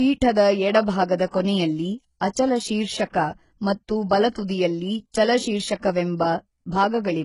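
Throughout the speech, nothing is heard above 11.1 kHz. The treble sounds gritty, and s sounds turn lispy and metallic. The likely cause is heavy HE-AAC compression, fitting a bitrate near 12 kbps. Copied lower bands stand in for the real treble.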